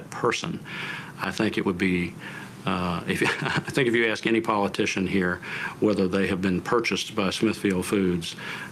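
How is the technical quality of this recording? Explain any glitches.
Nothing stood out on listening to this recording, and there are no glitches to explain.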